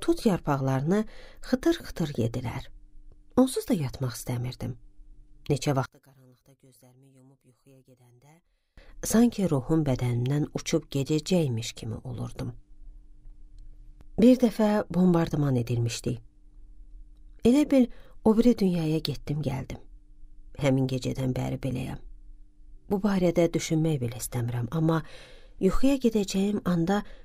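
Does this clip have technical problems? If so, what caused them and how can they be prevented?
Yes. From 5.86 to 8.78 s the sound drops by about 30 dB and turns faint, with its centre gone. The likely cause is one channel inverted: one stereo side's polarity is flipped, so the material common to both sides cancels when they are summed to mono. Checking polarity on every stereo path, and monitoring a mono fold-down, prevents this.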